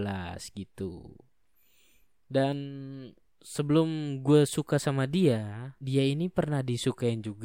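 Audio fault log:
No faults found in this speech recording.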